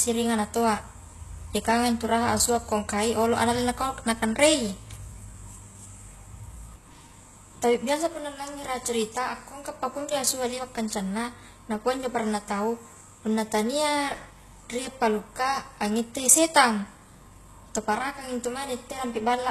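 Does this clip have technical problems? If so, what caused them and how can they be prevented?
Yes. Throughout the speech, s sounds come out gritty and metallic, and nothing is present above 12.3 kHz. This is likely HE-AAC compression, and the degree of damage fits a bitrate around 16 kbps. The codec encodes only the lower spectrum and rebuilds the treble by copying lower bands upward under a coarse envelope, so the upper harmonics no longer line up with the real ones. On a spectrogram this appears as a hard ceiling at 12.3 kHz with smeared, repeated-looking patches in the upper bands. Encoding at a higher bitrate, or with a codec that carries the treble directly, prevents it.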